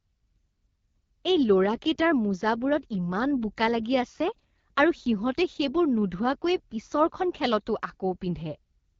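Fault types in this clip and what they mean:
AMR wideband (HD Voice) codec: Present throughout the speech, this codec models the voice up to 6.4 kHz as pulses driving a vocal tract filter and patches 6.4 to 7 kHz with shaped noise, so nothing is heard above 7 kHz. The damage is plainly audible: the voice sounds rough and raspy, which fits one of the two lowest AMR-WB rates, around 8.85 kbit/s, where too few bits remain to capture the excitation faithfully.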